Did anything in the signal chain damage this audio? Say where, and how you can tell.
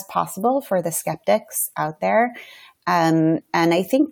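No, nothing in the chain audibly damaged this speech.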